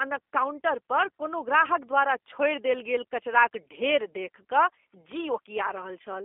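From start to finish, the speech carries the sound of the G.729 codec, in its G.729A form. The band is cut to a telephone line, roughly 300 Hz to 3.5 kHz, with nothing above 3.6 kHz. The voice is rebuilt from a vocal tract filter, a pitch predictor and a few pulses per frame, which fits an 8 kbit/s stream. The damage is plainly audible. Speech stays intelligible but sounds rough and synthetic.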